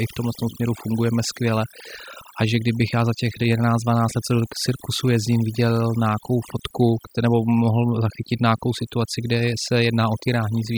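Overdone noise removal runs throughout the speech: an overly strong denoiser pulls noise-adjacent bands down, leaving twinkling specks in near-silent gaps.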